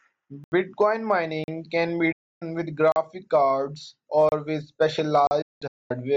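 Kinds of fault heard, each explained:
Block of digital silence: The speech drops to silence and jumps back with no fade. The output buffer was likely not filled in time and zeros went out instead. Five such holes occur, at 0.44, 1.44, 2.92, 4.29 and 5.27 s. The first lasts 80 ms and is heard as a short gap. The others last 30 to 40 ms and come across as short holes.
Digital broadcast dropout: The receiver lost valid frames and muted until good ones returned. Each mute has a quick fade of about 8 ms rather than a hard edge. From 2.12 to 2.42 s about 290 ms of speech vanishes, which fits nine lost frames. From 5.42 to 5.98 s the losses come as several holes spread over about half a second, the longest 224 ms. The speech sent during these holes is simply missing.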